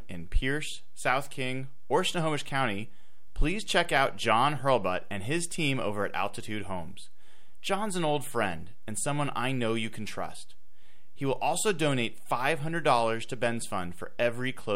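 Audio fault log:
Throughout: DC offset. The whole speech waveform sits shifted off zero by a constant of about -33 dBFS. The offset itself is inaudible, but it eats into headroom on one polarity and appears as steady energy at 0 Hz, the very bottom of the spectrum.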